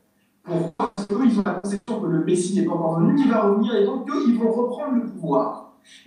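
From 0.67 to 1.90 s the sound turns choppy and robotic, with about six short holes, the longest near 120 ms. This is repeated packet loss (robotic sound): each missing stretch was patched by extending the preceding sound, leaving roughly 44% of that span filled in.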